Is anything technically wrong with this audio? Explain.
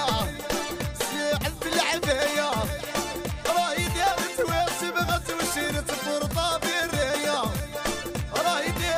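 No, nothing technically wrong turns up anywhere in this audio.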